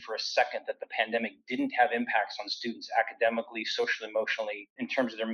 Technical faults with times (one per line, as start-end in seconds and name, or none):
0.00-5.33 noise suppressor applied to music or sounds
0.60-0.93 sound cut by the noise suppressor